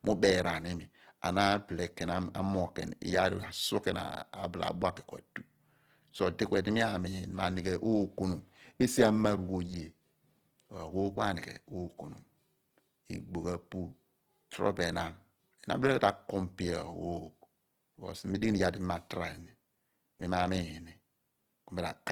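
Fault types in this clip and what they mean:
Opus compression: The speech was likely passed through Opus in its music (CELT) mode at a bitrate that fits about 16 kbps. Starved bands get filled with folded copies or noise, so the damage is plainly audible as grainy, rough texture, though content still reaches about 20.2 kHz.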